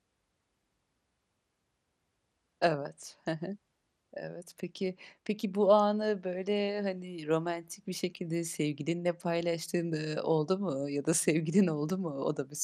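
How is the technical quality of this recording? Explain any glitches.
The technical quality is poor: a compression fault runs through the whole speech clip. Throughout, the sound is dull and carries a gurgling, granular grit, most likely from MP2 compression at a low rate, which fits roughly 80 kbps. Upper sub-bands drop in and out while the remaining bands are coarsely quantised. That flickering top end and grainy texture set it apart from a plain low-pass filter, which would dull the sound steadily without any grit.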